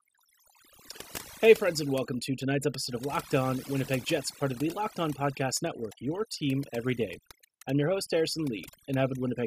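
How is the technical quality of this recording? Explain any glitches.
The recording has one fault, present from start to finish: overdone noise removal. A noise reduction stage set too strong pushes individual frequency bands down or off whenever they sit near its noise estimate, taking quiet parts of the speech with them. The background drops away and breaks into twinkling, warbling specks.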